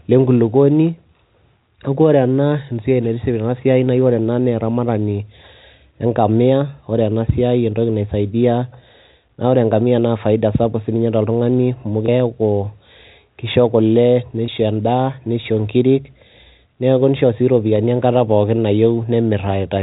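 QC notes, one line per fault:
12.06–12.08 s and 14.46–14.48 s, packet loss with pitch repetition: two brief gaps, each about 20 ms, which fits a single lost 20 ms packet. The first comes after "sapuk sininye toltung'ani amu", the second between "kisho kule" and "endaa nisho nkirik". At each gap the receiver bridged the missing audio by repeating the last pitch cycle, so the sound briefly holds with a slight buzzy sustain before the speech resumes. The surrounding band-limited G.711 telephone sound carries through unchanged.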